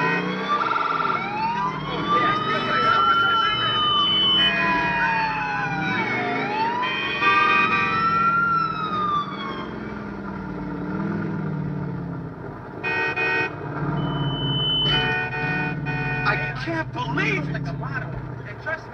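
The audio has loudspeaker feedback squeal at 1.84–4.53 s and 13.96–15.29 s: a 3 kHz tone swells over about three seconds, then under a second, to a few decibels above the sound, as the mic-speaker loop gain exceeds one. A spectrogram shows a bright horizontal line at 3 kHz, and the waveform shows a steadily growing envelope.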